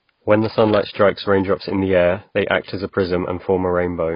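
From start to finish the speech sounds dull and smeared, with a warbling, fizzy edge on sibilants. The likely cause is heavy AAC compression, fitting a bitrate near 16 kbps. A spectrogram shows a hard ceiling at 5.1 kHz and patchy holes beneath.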